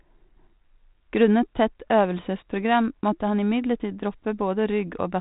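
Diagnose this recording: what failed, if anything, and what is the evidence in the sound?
Nothing in the recording points to a failure at any stage of the chain. The speech has the narrow telephone band of G.726 ADPCM running at 32 kbit/s, with nothing above 4 kHz and only a faint, level-following roughness from the coarse difference coding, which is how that path sounds when it is working as intended.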